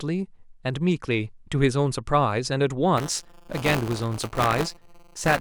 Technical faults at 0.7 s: none

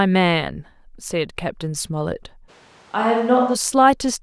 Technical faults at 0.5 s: none

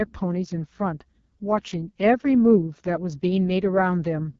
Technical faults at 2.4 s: AMR wideband (HD Voice) codec

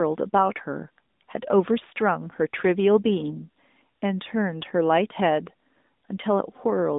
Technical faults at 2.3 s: AMR narrowband mobile codec

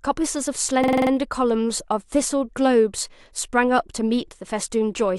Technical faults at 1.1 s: system hang loop

